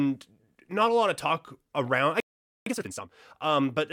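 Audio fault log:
2.20–2.66 s, playback stall: the player most likely ran short of buffered data or had its output thread held up, so nothing reached the output for about 0.46 s. The speech cuts off abruptly right after "of talk around I" and falls silent mid-flow before resuming.
2.66–3.12 s, time-compressed catch-up: to shed the backlog left by the stall, the player drops short slices and cross-fades the joins, running at roughly twice normal speed. The speech sounds hurried yet keeps its normal pitch.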